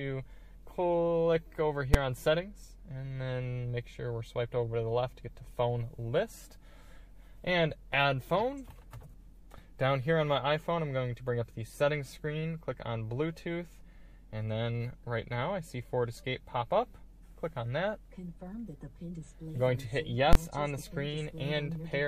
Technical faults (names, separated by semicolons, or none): invalid numbers at full scale